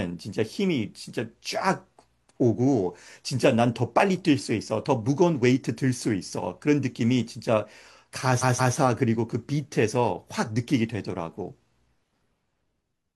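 At 8.38 s the speech stutters, a short fragment of about 0.17 s played twice more before moving on at 8.73 s. These are repeated frames: a run of compressed frames, about four going by its length, was decoded again, lengthening the audio by roughly 0.34 s.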